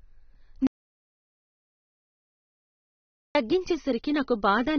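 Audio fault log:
Throughout: AAC compression, likely at a very low bitrate, around 15 kbps judging by the damage. Nothing comes through above 6.4 kHz, so the speech sounds dull, and the coarse quantisation leaves a smeared, warbly fizz on sibilants and held sounds.
0.67 to 3.35 s: audio dropout to silence. The speech cuts off mid-flow and about 2.68 s of dead digital silence follows, with no room tone at all. That points to the input likely being lost while the recorder kept writing silence.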